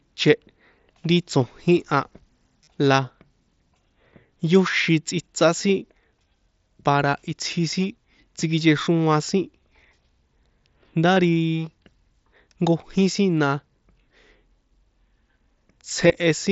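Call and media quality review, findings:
Brief buzzy held tone with a slight warble on recovery at 2.64–2.67 s (about 38 ms, fits five 7.5 ms frames), 11.15 s and 16.08–16.10 s. Near-inaudible blip at 4.72 s, just before "tsꞌitsá sin". Concealed Bluetooth headset packet loss: receiver repeats the closest-matching recent waveform to fill dropped frames. Light grain on loud passages from the mSBC headset codec, audio band up to 8 kHz.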